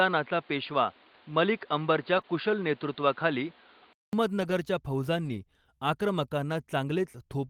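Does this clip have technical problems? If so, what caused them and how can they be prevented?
Yes, there are three kinds of problem here.

From the start to 4.13 s the speech sounds dull and boxy. Nothing comes through above 4.8 kHz, there's a layer of background noise roughly 30 dB under the speech, and the level sits about 5 dB off from the later section. At 4.13 s there's a 200 ms silence, and then the sound opens up. That's most likely an input switched to a poorer device, such as a secondary mic or a headset's call profile, before the system moved back to the better input. Lock the input device in the OS or app and keep headsets out of call mode so nothing swaps mid-recording.

There's lost-packet rebuilding from error correction at 2.17 s (20 ms), 4.41–4.51 s (60 ms) and 5.25–5.39 s (80 ms). There aren't any actual gaps. Instead those stretches turn rougher and grainier. The lengths fit one, three and four lost 20 ms packets. 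Each time, the decoder played the low-bitrate backup copy carried in the following packet, so the audio stays continuous but at reduced quality. A steadier network path, such as wired rather than congested Wi-Fi, or a bit more jitter buffer would cut the losses behind these.

Right after the first rebuild comes a short concealed packet loss at 2.21–2.25 s. About 20 ms of audio never made it in time, and the receiver papered over roughly 17 ms of it by extending the preceding sound and blending back in. You hear it as a quick smear or wobble rather than a dropout. The same fix applies here: reduce packet loss at the network level so the decoder isn't left guessing.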